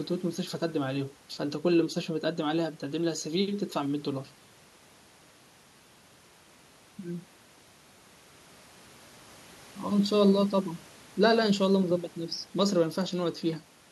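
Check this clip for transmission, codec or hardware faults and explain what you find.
No transmission, codec or hardware faults can be heard in this speech recording; the signal comes across intact, with no dropouts, distortion or other impairment.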